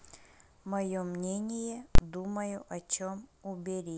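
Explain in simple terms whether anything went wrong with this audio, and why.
Invalid numbers at full scale, from 1.95 to 1.98 s: a calculation broke and pinned the output at maximum level for about 32 ms, heard as one sharp bang.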